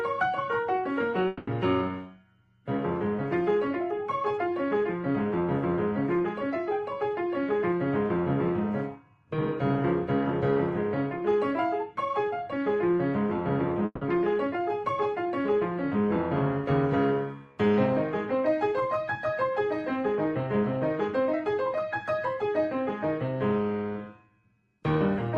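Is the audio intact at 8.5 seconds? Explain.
Yes, the audio is intact at 8.5 seconds, with nothing there beyond the ordinary band-limited character of the call codec it passed through.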